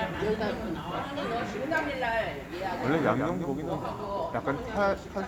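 From 2.64 s to 4.20 s the sound is doubled: a second full-band copy trails the original by roughly 150 ms, around 5 dB quieter, giving a flat, slap-like echo with no decay or room colour. This doubled audio track most likely comes from the signal being captured twice through paths of different latency. On a spectrogram every event appears twice, offset by a fixed gap, and the copy starts and stops abruptly at those times.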